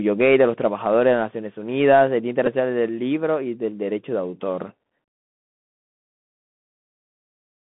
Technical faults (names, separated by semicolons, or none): Bluetooth CVSD headset codec; Bluetooth headset packet repeated